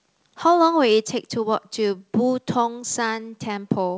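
At 1.02 s the speech drops by about 4 dB in one clean step and stays there, likely the microphone volume stepped down, unlike a gradual fade or brief dropout.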